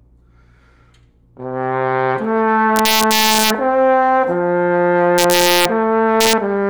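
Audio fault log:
2.76–3.50 s, 5.18–5.65 s and 6.2–6.33 s, integer overflow: the gain stage pushed peaks about 1 to 2 dB past the integer limit, and instead of clamping, they wrapped to the opposite extreme. Each over-range peak jumps across the full scale, producing harsh, violent cracks far sharper than clipping.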